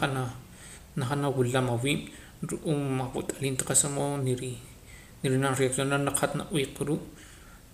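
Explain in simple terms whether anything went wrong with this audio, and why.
Right around 0.59 s the speech jumps ahead slightly, with no gap. That's most likely a dropped buffer (overrun): the recording software missed a tiny chunk, roughly a fiftieth of a second, before it was overwritten, and the two sides got stitched together.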